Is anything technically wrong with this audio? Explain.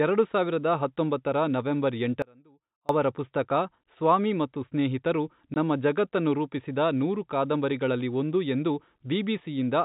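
Yes. From 2.22 to 2.89 s the speech drops out for about 0.67 s to a faint residue roughly 30 dB down, an abrupt audio dropout, likely a lost signal feed with the path still live. At 5.54 s, packet loss filled with silence cuts a hard-edged 20 ms hole, which fits one dropped packet replaced by silence. The G.711 telephone coding limits the band throughout, passing nothing above 4 kHz.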